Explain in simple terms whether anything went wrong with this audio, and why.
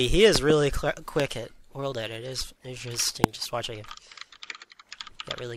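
Loud pops at 0.36 to 0.52 s (two in quick succession), 1.20 to 1.22 s and 3.24 to 3.26 s. These are sharp bursts well above the sound, which carries on underneath. Each is likely a brief electrical jolt from a plug, switch or static.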